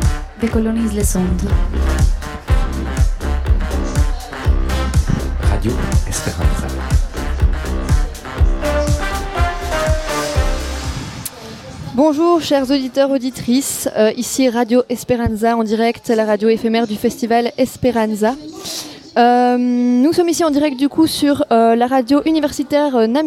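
No technical faults can be heard anywhere in the clip, and the signal holds steady throughout.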